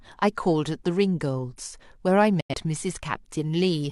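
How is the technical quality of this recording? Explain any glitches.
The speech carries one clear glitch, a brief digital broadcast dropout. From 2.40 to 2.54 s the receiver muted, likely after frames failed their checks. The sound fades out over about 8 ms into a silent hole, the gap fitting two lost frames, and that speech is gone. A waveform flattens there; a spectrogram shows a blank vertical band across all frequencies.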